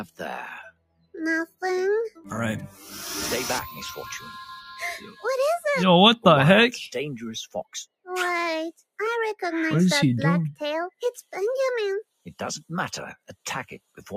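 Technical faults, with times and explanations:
throughout, noise suppressor applied to music or sounds: the level pumps and sustains thin out by a few decibels, as a speech-tuned suppressor treats steady tones and tails as noise.
0.67–1.14 s, 2.68–2.83 s, 5.0–5.24 s, sound cut by the noise suppressor: held sound sinks, by about 21 dB first, then about 8 dB twice, because the suppressor mistook it for noise.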